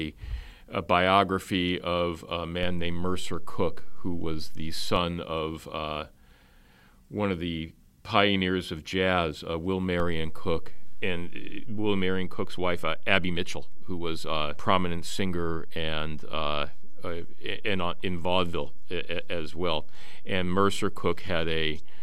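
Speech with two DC steps, where the waveform's zero line jumps by about -24 dBFS. The first comes at 2.63 s after "a biography of a" and returns at 4.96 s before "of uh". The second begins at 10.0 s and holds to the end. Each step is a single low thump while the speech runs on unchanged, not a crackle or a gap in the sound.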